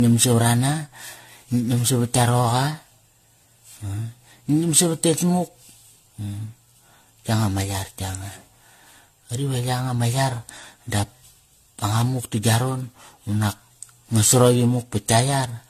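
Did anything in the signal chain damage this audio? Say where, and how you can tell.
Yes, generation loss at the codec stage, throughout: swirly, hollow, smeared speech with blurred attacks and nothing above 14 kHz, likely from about seven AAC-LC re-encodes near 64 kbit/s.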